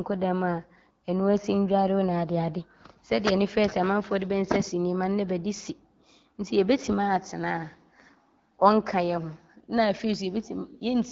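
Nothing faulty is audible anywhere in this speech.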